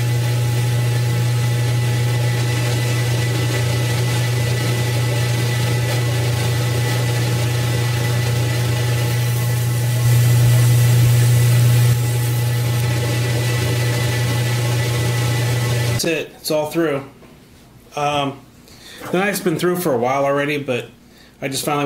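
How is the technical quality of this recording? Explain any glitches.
The recording has one glitch, a doubled audio track, from 10.05 s to 11.93 s. A second full-band copy of the sound runs about 0.7 s behind the original at roughly the same level, so everything in that stretch is heard twice. The likely cause is the same signal reaching the mix a second time, through a slower capture path or an edit that left two copies out of step. The copy has no decay or room colour, and it cuts in and out abruptly.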